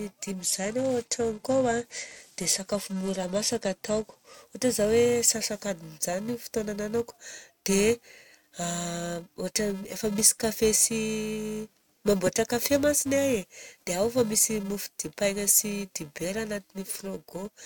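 A steady buzz at 375 Hz runs through the whole speech clip, rising and falling with the level of the speech. It is a filter restarted on every block. The filter loses its memory at each boundary, adding a small transient every 128 samples at 48 kHz.

From 0.41 to 4.34 s, the treble goes dull and a gritty, grainy noise sits on the speech. This is a Bluetooth SBC bit pool drop. The sound points to the encoder cutting its bit pool from 28 to 12, roughly 96 kbps, which starves the upper sub-bands and quantises the rest coarsely until the rate recovers.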